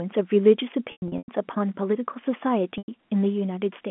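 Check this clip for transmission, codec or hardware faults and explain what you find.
There is one fault: packet loss with pitch repetition, heard twice over G.711 telephone coding. From 0.92 to 1.28 s, about 240 ms of gaps scatter across 360 ms, the longest lasting 100 ms. At 2.78 to 2.88 s, another 100 ms drops out. Each gap suggests lost 20 ms packets. The receiver repeats the last pitch period, so the speech holds with a buzzy tone, fades toward silence, then cross-fades back.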